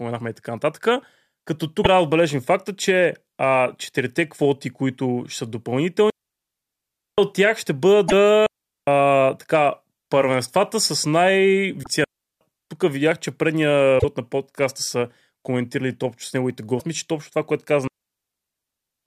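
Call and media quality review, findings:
Damaged data in a compressed stream: short glitches at 1.81, 8.05, 11.80, 13.96 and 16.77 s, each roughly 50 to 90 ms. Probable component: codec decode path. Mechanism: corrupted or lost bytes make the decoder misread frames, lose sync and hunt for the next frame header. Distinguishing trait: a decoder glitch from lost frame sync, not a receiver mute.

Digital wireless dropout: clean mutes at 6.10–7.18 s (about 1.08 s), 8.46–8.87 s (0.41 s), 12.04–12.41 s (0.37 s) and 17.87–19.06 s (1.19 s, running to the end of the clip). Probable component: digital wireless link/receiver. Mechanism: too much data lost, so the receiver mutes behind a very short fade. Distinguishing trait: near-silent holes with no noise burst on either side, unlike the decoder glitches.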